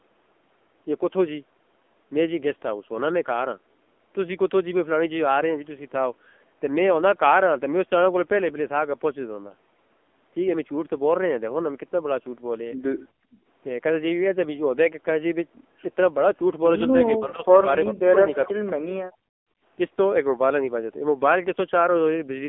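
Throughout, the speech sounds thin, buzzy and synthetic, with nothing above 3.5 kHz and little below 250 Hz. This is heavy AMR narrowband mobile codec damage, which fits a low rate near 6.7 kbps.

From 13.13 to 13.46 s, the room background drops away by about 37 dB. This is background gated by the echo canceller, which turns the microphone down hard while the loudspeaker plays.

From 17.19 to 17.67 s, the voice dips by around 15 dB. From 17.92 to 18.73 s, it is cut back more deeply, by around 30 dB. This is likely speech suppressed in double talk, with the canceller turning the talker down while the far side is also speaking.

From 19.07 to 19.61 s, the background gating returns and the room sound drops by about 40 dB before the canceller lets go.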